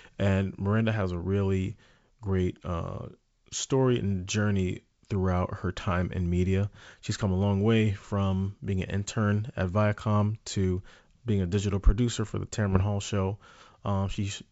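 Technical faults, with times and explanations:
5.81–5.92 s and 12.71–12.83 s, bit errors on an ADPCM link: each burst gives rough pops and level jumps that ring on briefly as the decoder's step size and predictor recover. Unlike a clean click or dropout, the disturbance is smeared over about a tenth of a second.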